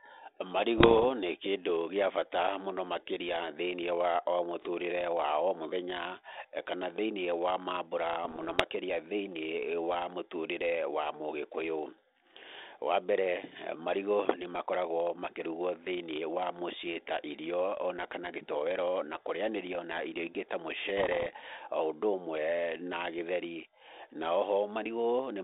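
Three short stretches of bit errors on an ADPCM link, at 0.78 to 1.06 s, 8.23 to 8.62 s and 20.98 to 21.27 s, break up the speech. Each flipped bit throws the decoder's step size and predictor off, so instead of a clean click you get pops trailing into rough, gravelly bursts with quick jumps in level. The first patch sounds densest, around a percent of bits hit. The other two are lighter. It's all riding on a narrow G.726 ADPCM telephone band, roughly 300 Hz to 3.7 kHz.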